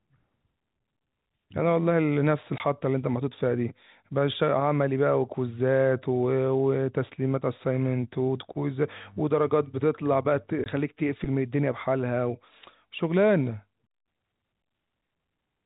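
This speech clip has two brief dropouts, from 2.58 to 2.60 s and from 10.64 to 10.66 s. In each, the sound cuts abruptly to dead silence for 20 ms. This is packet loss filled with silence. A stretch of the stream never arrived, and the receiver inserted zeros instead of concealing the gap, so each hole fits a single lost 20 ms packet. Throughout, the G.711 telephone coding shows its usual 4 kHz upper band limit.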